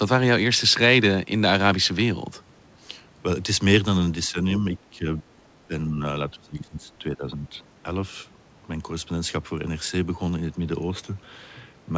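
The voice dips from 4.31 to 4.64 s, 4.91 to 5.07 s, 5.68 to 6.01 s and 6.30 to 7.55 s, by about 5, 10, 10 and 20 dB, the final stretch being the longest and deepest. This is speech suppressed in double talk, likely an echo canceller turning down this talker along with the loudspeaker echo.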